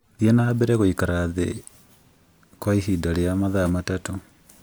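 No technical faults are audible.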